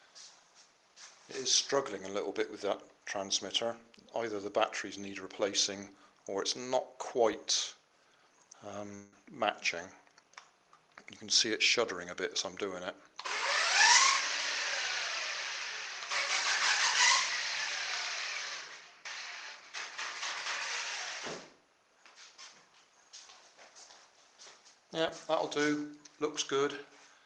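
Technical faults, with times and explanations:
7.33 s and 25.08 s, DC step: the waveform's zero line jumps abruptly at each point, heard as a brief low thump while the sound carries on unchanged. The offset then drains away, as a high-pass around 5 Hz pulls it back toward zero.
8.94 to 9.13 s, long network dropout: for about 0.18 s the last sound smears into a fading buzz rather than continuing, with no true silence, and the audio resumes missing roughly 180 ms of material, likely because packets never arrived.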